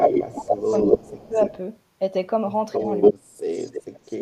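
Speech with a delayed copy of itself trailing behind it: an echo leak from 0.0 to 1.57 s, again at 2.73 to 3.14 s, and at 3.54 to 4.17 s, lagging by 275, 285 and 290 ms. The first two stretches sit louder than the speech itself, by about 5 and 10 dB, and the last is well below it. That's likely a loudspeaker on the far end whose echo canceller let its mic pickup slip back through. The speech also dips at 0.34 to 0.64 s, 0.84 to 1.03 s and 1.29 to 1.38 s, by roughly 10 to 15 dB at worst. That's speech suppressed in double talk, likely the canceller ducking the talker while it fights the echo overlapping them.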